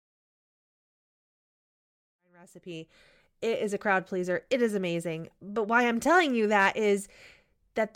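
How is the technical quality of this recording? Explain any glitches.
No glitches; the speech fades in smoothly, reaching full level by 3.47 s.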